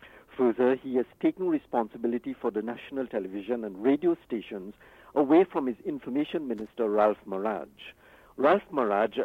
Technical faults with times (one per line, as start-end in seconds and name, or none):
6.58-6.67 loose connector crackle